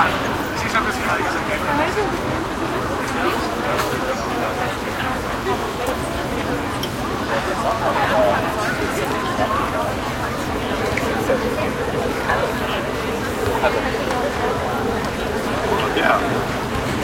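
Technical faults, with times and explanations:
1.10 s, repeated buffer: a brief click, where a 10 ms slice of the sound plays twice back to back with a hard join. New audio arrived late, so the device replayed its last buffer once, and nothing appears lost.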